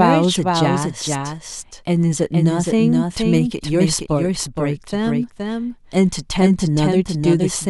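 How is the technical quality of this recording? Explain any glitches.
The recording has one clear fault, a doubled audio track that runs through the whole clip. The speech is heard twice: a full-band copy about half a second behind the original and roughly 5 dB quieter, with no reverb tail. It was likely caused by a second, slower capture path or an edit that left two misaligned copies mixed together. On a waveform and spectrogram, each burst of speech reappears as a fainter, identical shape shifted half a second later.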